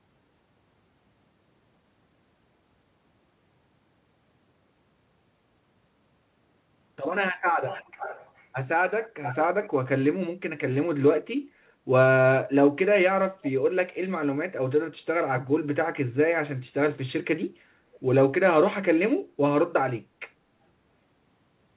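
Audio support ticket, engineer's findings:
Echo leak, 7.67–8.47 s, 9.03–9.37 s, 9.62–9.70 s, 17.94–18.00 s: delayed repeat, about 10–30 dB down, 406 ms lag (489 ms at end). Likely far-end speaker echo slipping past the canceller.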